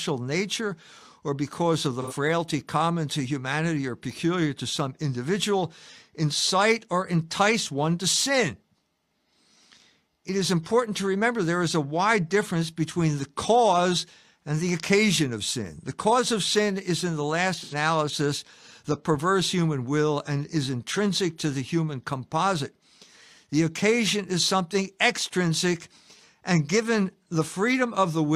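AAC frame loss with concealment at 2.02–2.13 s, after "or because of the", and 17.62–17.74 s, after "is in the last". Each 85 ms gap, consistent with two lost frames, is filled from the previous spectrum and sounds like a brief smeared, phasey patch.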